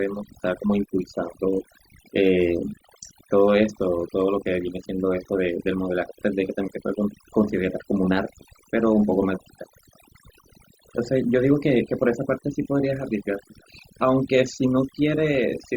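From start to finish you can hear overdone noise removal: the denoiser was pushed too hard, so any frequency band sitting near its noise estimate gets clamped down, taking softer parts of the speech with it. The background drops and breaks up into little twinkling specks.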